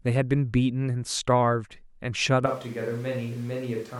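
At 2.46 s the close microphone's feed most likely drops out and the recording falls back to a pickup much further from the talker, a switch to a distant microphone that holds until the clip ends. The change is abrupt: the speech suddenly turns roomy and hollow, loses its low end, and sits roughly 5 dB quieter, while background room noise rises to around 25 dB below the speech.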